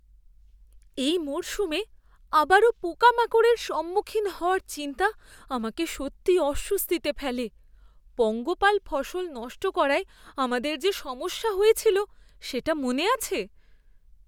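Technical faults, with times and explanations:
No technical faults are audible in this speech.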